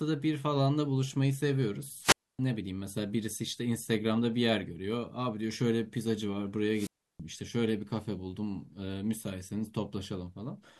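Twice the radio link of the wireless microphone weakens until the receiver's squelch cuts the output, a wireless microphone squelch dropout. From 2.00 to 2.39 s a short swell of hiss gives way to near silence of about 270 ms before the speech returns. From 6.72 to 7.20 s the same happens, with the mute lasting about 330 ms, leaving a clear hole in the speech each time.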